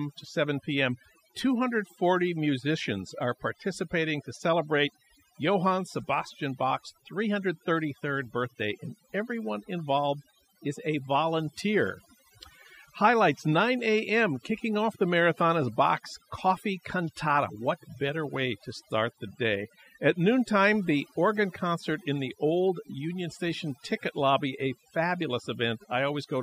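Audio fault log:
Throughout: overdone noise removal. Noise reduction pushed too hard has switched off individual frequency bands sitting near the noise floor. Softer speech detail went with them, leaving a near-silent background with twinkling specks. On a spectrogram, the floor looks blank and scattered with isolated bright dots, and the speech shows ragged, gappy harmonics.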